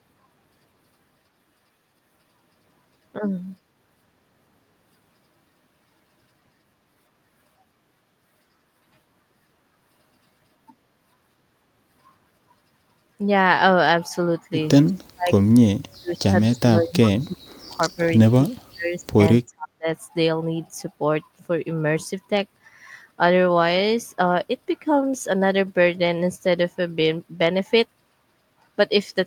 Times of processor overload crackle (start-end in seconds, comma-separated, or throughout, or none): none